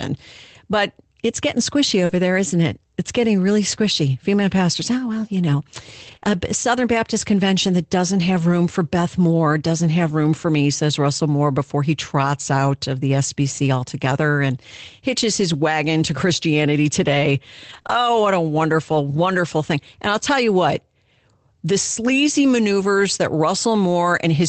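A brief smear at 2.05 to 2.11 s, right after "it's getting squishy" and before "there isn't it it's", is short concealed packet loss. About 40 ms never arrived in time, so the decoder stretched the preceding sound to cover the hole and then blended back. Its last 20 ms, 2.09 to 2.11 s, comes through rougher and noisier. That is a lost packet rebuilt from error correction: the following packet carried a low-bitrate copy, which the Opus decoder played instead of leaving a gap.

The same grainy patch returns for 20 ms at 3.75 s. It returns again from 6.07 to 6.17 s, after "oh well you know" and before "a uh", where about 60 ms of rebuilt audio points to several packets recovered this way. A 20 ms concealed dropout follows at 6.19 to 6.23 s as a quick wobble.

The densest cluster sits just before "what a wonderful wonderful". Rebuilt, noisy audio runs from 17.69 to 17.79 s. A 20 ms concealment smear follows at 17.81 to 17.85 s. 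More rebuilt frames run from 17.85 to 17.99 s, about 80 ms in total. Throughout, the call audio stops at 8 kHz, which is the bandwidth the Opus call path was set to.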